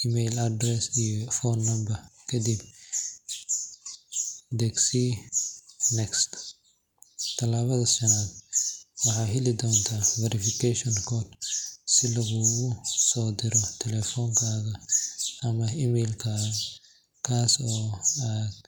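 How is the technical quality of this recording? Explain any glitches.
The technical quality of this recording holds up, with no glitches to explain.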